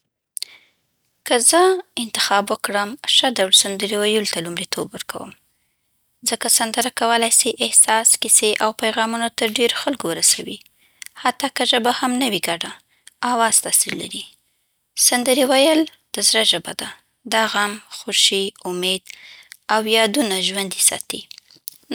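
No technical faults can be heard.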